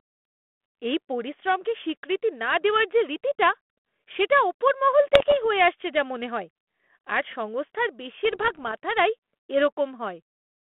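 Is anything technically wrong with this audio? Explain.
Yes. Bit errors on an ADPCM link strike twice, from 5.14 to 5.45 s and from 8.25 to 8.72 s, over a telephone-band ADPCM path that fits 32 kbit/s G.726. Each flipped bit corrupts the decoder's step size and prediction, so the error lingers for several milliseconds. With scattered bit errors, on the order of half a percent, the speech breaks into pops and rough, gritty bursts with brief jumps in level.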